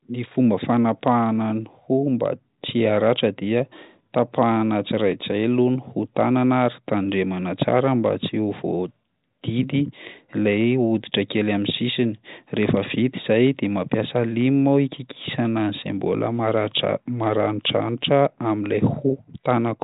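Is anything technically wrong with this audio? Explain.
No, nothing technically wrong is audible in this speech.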